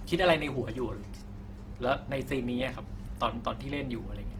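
Across the whole recording the speech has a rough, grainy texture, with upper harmonics smeared into noise. This is plainly audible Opus compression, likely from the music (CELT) mode at a low bitrate that fits about 16 kbps. Short of bits, the encoder keeps each band's energy but refills detail with folded or noise content. On a spectrogram, energy reaches about 20.2 kHz without the gaps MP3 leaves, but harmonic striations blur into speckled noise.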